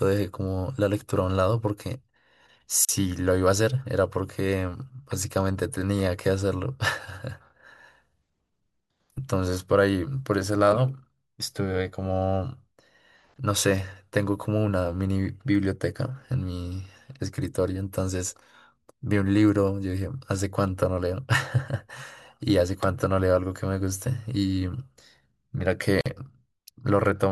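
A gap at a join of encoded pieces opens at 2.85 s and again at 26.01 s, breaking the speech with silences of about 37 ms and 48 ms. Separately encoded segments were spliced untrimmed, leaving encoder delay and final-frame padding as brief, smeared dropouts before the speech resumes.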